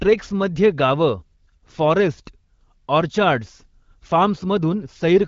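No technical faults can be heard in this speech. It carries the sound of the AMR wideband (HD Voice) codec working as intended: the speech stays clear with only light coding texture, which fits a rate of around 12.65 kbit/s, and nothing is heard above about 7.6 kHz.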